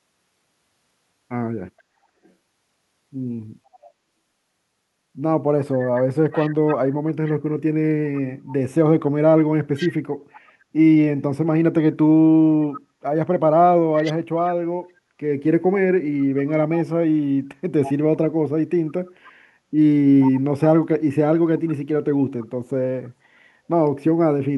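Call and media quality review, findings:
Echo leak, 1.78–3.89 s (faint), 5.97–10.52 s, 12.73–14.48 s, 16.37–22.46 s (about 15 dB under speech). Delayed copy of the speech trailing by 478 ms. Likely far-end loudspeaker pickup slipping past an incomplete echo canceller and sent back.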